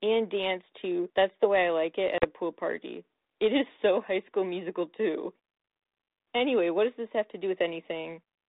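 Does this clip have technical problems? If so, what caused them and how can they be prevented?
Yes: packet loss on an ADPCM call at 2.18–2.25 s leaves a 40 ms silent hole, roughly two packets, right before "a pool party". The decoder's predictor and step size drift from the sender's, so the speech comes back slightly distorted. Jitter buffering or packet-loss concealment that resyncs the ADPCM state would prevent it.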